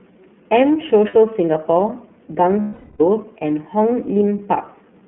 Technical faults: iLBC codec; lost iLBC frames

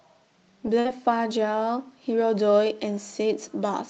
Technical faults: burst of packet loss

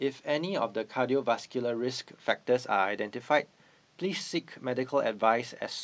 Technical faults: none

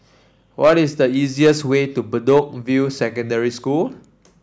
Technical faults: hard clipping

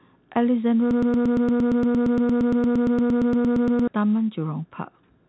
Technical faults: broken-record loop

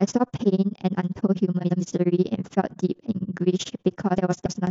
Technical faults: overlap-add ripple; frames out of order

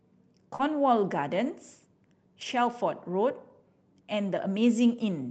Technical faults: short concealed packet loss; lost packet rebuilt from error correction

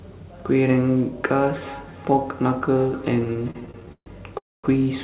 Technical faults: feedback echo between two devices; repeated stalls (stutter); call audio freeze

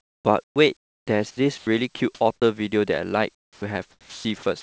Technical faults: sound chopped by the voice detector; sound dropped by the voice detector; onset clipped by the voice detector; comfort noise in place of the background

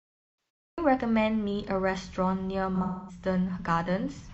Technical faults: cut-off start; AAC frame loss with concealment

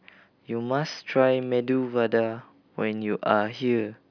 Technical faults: none

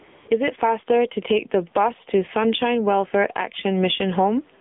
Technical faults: gain pumping; AMR narrowband mobile codec; AMR comfort noise

